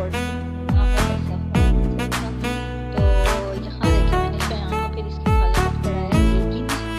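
No technical faults can be heard anywhere in this clip. The sound runs without any interruption or disturbance that would point to a problem in how it was captured or carried.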